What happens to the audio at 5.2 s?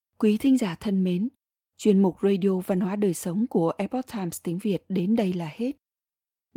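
A lost packet rebuilt from error correction occurs from 5.15 to 5.21 s. The stream lost data there, and the following packets carried low-bitrate backup copies of it, so the decoder played those instead of leaving a hole. The rebuilt stretch is about 40 ms, which fits two 20 ms packets. The speech runs without a gap, but for that instant it turns rougher and noisier than the surrounding audio.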